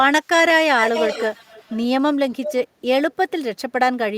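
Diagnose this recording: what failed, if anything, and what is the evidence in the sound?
Echo leak at the call-processing stage: a delayed copy of the speech, trailing by 390 ms, runs from 0.78 to 1.79 s at about 5 dB below the direct speech, and again from 2.28 to 2.67 s at about 10 dB down, likely a far-end echo canceller passing residual loudspeaker pickup back.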